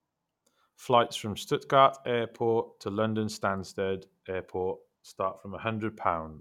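Nothing goes wrong anywhere in this recording, so there's no technical fault to describe.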